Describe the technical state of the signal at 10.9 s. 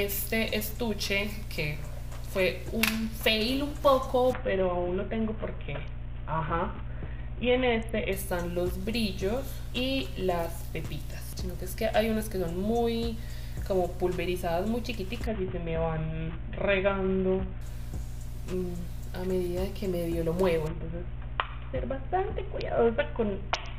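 At 10.9 s the signal is intact, with nothing audible to suggest a technical fault at that point.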